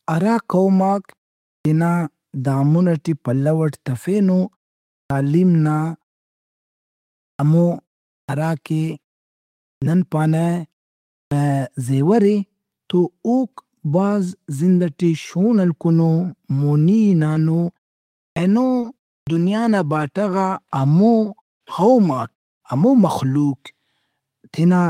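Clipped start after a pause at 1.61, 5.06, 7.35, 8.24, 9.77, 11.27 (before "زیور اے تو اوک"), 18.32 and 19.23 s (before "دنیا نا"). Each time, the output is still waking after silence, swallowing 41 to 48 ms of onset. Words snap in abruptly, and the waveform shows a hard-edged start with no gradual rise.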